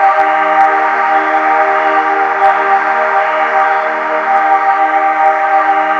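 Hard clipping flattens the peaks at 1.38–1.99, 2.42–3.20 (about 3 dB over, harshest), 3.60–3.62, 4.36–4.70 and 5.26–5.57 s. The sound overloads a stage, so the waveform tops are squared off, giving a crackly fuzz with harmonics smeared high up the spectrogram.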